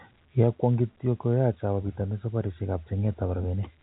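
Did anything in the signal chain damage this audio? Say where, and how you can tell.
No, nothing damaged this audio.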